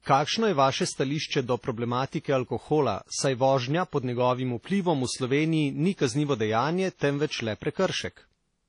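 Speech that was likely transcoded between lossy codecs, first a low-rate HE-AAC encode and then WMA, both around 32 kbit/s by their sound. The second encoder spends bits re-coding the first one's artefacts, so both sets of smearing overlap throughout, with nothing above 10.1 kHz.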